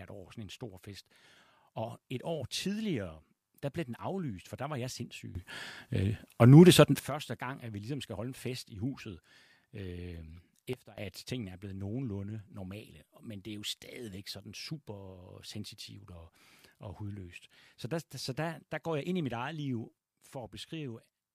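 A speech clip with sudden gain jumps: the level rises by about 16 dB from 5.35 to 6.99 s, drops by about 16 dB from 10.73 to 10.98 s, and falls by about 6 dB from 19.98 s to the end. Speech and background noise step together with no ramp, which sets this apart from automatic gain control, whose changes glide. The likely cause is a digital gain setting applied instantly.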